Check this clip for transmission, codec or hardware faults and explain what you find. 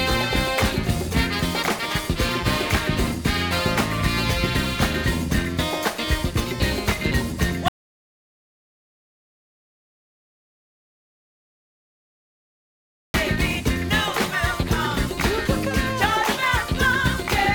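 One fault stands out: an audio dropout to silence running from 7.68 s to 13.14 s, so about 5.5 s of sound is lost. The sound stops abruptly in mid-flow, the gap is silent with no room tone, and it resumes just as abruptly. The likely cause is the input being cut off, through a disconnected device, a broken link or a stray mute, while recording carried on writing zeros. A waveform shows a flat line and a spectrogram a blank band across every frequency.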